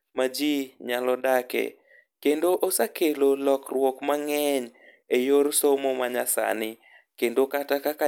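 Nothing in the speech stood out as a technical fault on listening.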